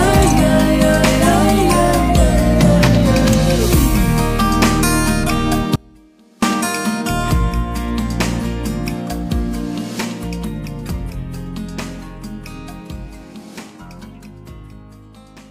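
The wanted signal likely cut out while the path stayed live, causing an audio dropout to a faint residue from 5.76 to 6.42 s, leaving a faint leak roughly 30 dB down.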